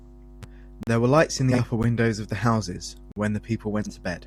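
Speech, broken by abrupt dropouts and two garbled flutters. Blocks of digital silence cut the sound to nothing: a short hole of about 40 ms at 0.83 to 0.87 s, a tick at 1.83 s lasting about 12 ms, and a 46 ms hole at 3.12 to 3.16 s. The output buffer wasn't filled in time, which fits 512-sample and 2048-sample buffers. At 1.51 to 1.59 s and 3.82 to 3.94 s, frames out of order give a brief stuttering flutter, as two neighbouring runs of 30 ms and then 40 ms were decoded with their halves exchanged.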